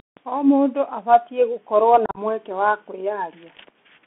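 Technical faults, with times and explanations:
Throughout: Bluetooth CVSD headset codec. The sound is confined to a narrow band of roughly 200 Hz to 3.4 kHz. A one-bit, 64 kbps delta coder whose step size lags fast rises leaves granular hiss and gritty, overloaded sibilants, unlike the clean dullness of plain band-limiting.
2.06 to 2.19 s: unconcealed Bluetooth headset packet loss, between "mũndũ abatiĩ gũkorwo" and "mweke wa". About 75 ms of audio goes missing across roughly 105 ms, the longest run near 38 ms, which fits around ten lost packets. The hard-edged, chopped holes are left as silence or an idle pattern rather than smoothed over.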